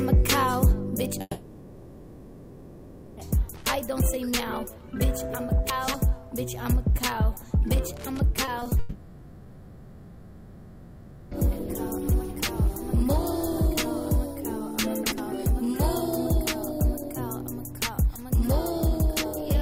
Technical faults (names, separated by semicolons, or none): long network dropout; loose connector crackle; chunks out of order; repeated packet loss (robotic sound)